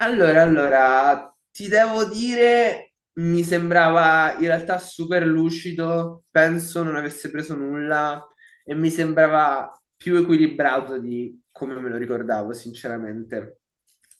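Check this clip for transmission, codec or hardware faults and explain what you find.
Nothing to report: no fault is audible anywhere in the speech.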